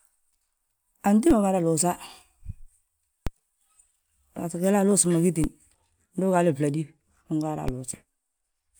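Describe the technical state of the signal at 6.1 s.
At 6.1 s the signal is intact, with no dropout, clipping, distortion or other technical fault to be heard.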